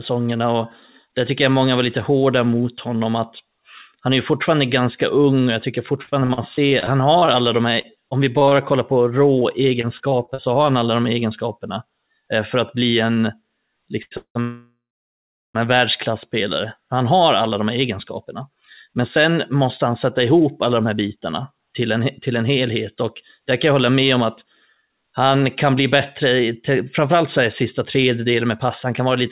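Between 5.86 and 8.53 s, and again between 9.39 and 10.40 s, the speech breaks up into repeated packet loss with a robotic sound. The receiver covered a run of short holes, 17 in the first stretch and 6 in the second, none longer than about 42 ms, by extending the preceding waveform. About 15 to 16 percent of each span is patched this way. The result is choppy, robotic speech with small pieces missing.

At 14.03 to 14.13 s there is a short stall from a late packet. The jitter buffer emptied, and the last sound was stretched for 86 ms until the packet turned up. Playback then resumed where it had paused, so nothing is lost, but that moment is held too long with a slight buzz or dip.

Two call audio freezes follow, at 14.17 to 14.37 s and 14.41 to 15.56 s. Both are likely caused by packets held up in transit, leaving the jitter buffer with nothing to play. In each, the last sound is continued as a fading buzz or hiss and then drops to silence, about 90 ms of it in the first and about 750 ms in the second. 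Playback then carries on from the stopping point, which inserts gaps of 180 ms and 1.13 s without dropping speech.

From 17.14 s to the end at 29.28 s, a jitter buffer speed-up is audible. The buffer held more than its target. The receiver trimmed short pitch-period segments again and again, around 0.7 s in total. Speech runs about 6 percent fast at unchanged pitch and sounds rushed. Throughout, the band stops at 4 kHz, which fits the narrowband G.711 A-law call codec.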